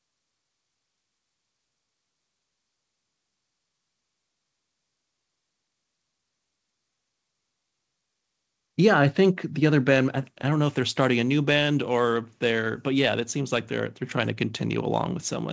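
No technical faults can be heard in this speech; the sound carries the usual coding noise of a wideband G.722 call path and nothing above 8 kHz, as that codec normally produces.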